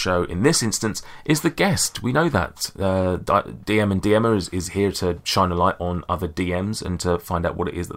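Nothing goes wrong anywhere in this bit of speech, so there's no fault to point to at any moment.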